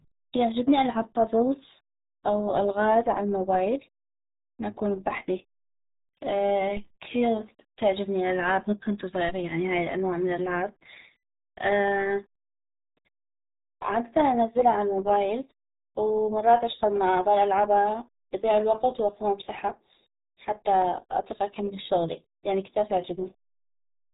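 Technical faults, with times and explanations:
Throughout: RealAudio 14.4 codec. The speech sounds muffled and gargly, with heavy codec damage. The coarse, roughly 8 kbit/s coding, the kind built for dial-up modems, removes everything above 3.8 kHz. A spectrogram shows a hard ceiling there, with smeared, blotchy formants beneath it.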